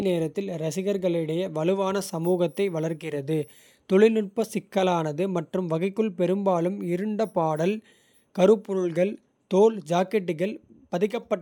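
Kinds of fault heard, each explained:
Nothing stood out on listening to this speech recording.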